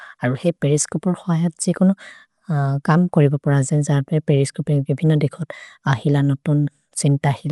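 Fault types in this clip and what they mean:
Dolby Digital compression: throughout, the speech is dull, with nothing above 11.4 kHz and a plainly audible rough, fluttering noise around tones. This fits a likely AC-3 encoder at about 64 kbps filling bare lines with dither, whereas a plain low-pass filter adds no such noise.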